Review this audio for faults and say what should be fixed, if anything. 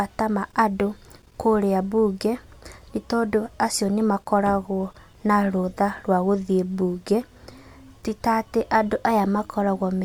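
Nothing stood out on listening, so there is nothing here that needs fixing.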